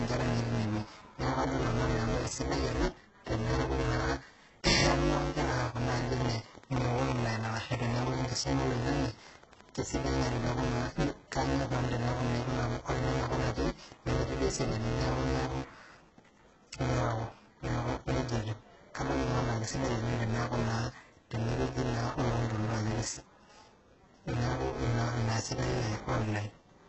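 Buffer tearing runs throughout: writer and reader of the playback buffer overlap, so about a fifth of each buffer repeats audio from roughly 10 ms earlier. It produces a 200 Hz robotic buzz that, unlike clicks, vanishes in pauses.

HE-AAC compression is also present throughout. The treble is rebuilt rather than kept, and nothing reaches above 8 kHz. The heavy damage, with gritty, lispy s sounds, likely comes from a very low bitrate near 8 kbps. This differs from plain band-limiting, which would dull the sound rather than roughen it.

From 5.44 to 10.38 s, a train of clicks ticks regularly at 11.8 per second, about fifty in all, peaking about 5 dB above the speech. Unlike the tearing buzz, they continue through pauses and point to external interference or a faulty connection or power supply.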